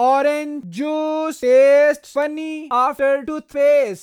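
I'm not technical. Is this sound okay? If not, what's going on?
No. Between about 1.08 and 3.37 seconds the speech has three sharp ticks, roughly one each second. These are word clock ticks: two pieces of digital equipment are each keeping their own time, and their clocks disagree very slightly, by around twenty parts in a million. Each time they slip out of step, a single sample is dropped or repeated, causing a tick. Random clicks or crackle come at uneven moments, but these arrive at a steady beat.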